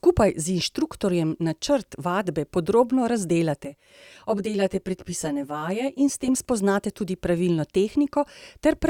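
From 3.65 to 6.28 s, just before "spoznate tudi pravilno", channel delay causes comb filtering: one channel lags about 10 ms, so mono summing carves notches from roughly 50 Hz upward, sounding hollow.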